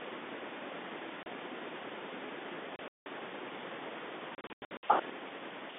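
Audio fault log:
1.23 s: packet loss filled with silence. A single 30 ms hole drops to silence with hard edges, which fits one lost 30 ms packet. Concealment would have bridged it with stretched or repeated sound. The narrow 250 Hz to 3.6 kHz telephone band stays intact around the gap.
2.76 to 3.06 s: packet loss filled with silence. About 210 ms goes missing across 300 ms, mostly in one 180 ms run, with one shorter 30 ms hole besides. Every hole is a multiple of 30 ms and starts and stops abruptly. That fixed step separates it from fading or a slow level drop.
4.35 to 4.83 s: packet loss filled with silence. This is the largest loss, with about 300 ms lost across 480 ms. No run is longer than 90 ms, so the sound stutters in rapid on-off chops rather than stopping in one clean gap.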